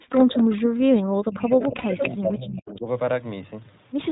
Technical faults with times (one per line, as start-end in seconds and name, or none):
0.00-4.12 iLBC codec
0.00-2.87 speech suppressed in double talk
0.12-0.24 echo leak
1.49-2.09 echo leak
1.78-1.85 lost iLBC frames
2.76-2.81 echo leak